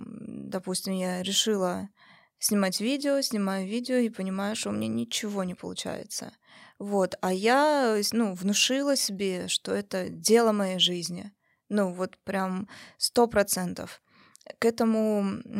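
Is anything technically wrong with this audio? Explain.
No, nothing technically wrong.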